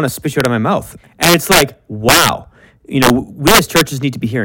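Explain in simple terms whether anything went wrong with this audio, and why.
Integer overflow cracks the speech at 0.40 s, right after "to spit you", and again at 1.23 to 1.62 s after "of my mouth", 2.09 to 2.29 s, 3.03 to 3.10 s and 3.47 to 3.81 s. On loud moments the sound level went past the biggest number the system could store, and instead of stopping at the top it wrapped around to the opposite extreme, giving harsh, violent cracks far sharper than ordinary distortion.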